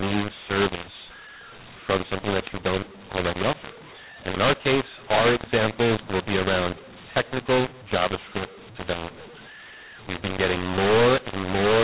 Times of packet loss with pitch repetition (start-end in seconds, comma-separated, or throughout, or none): none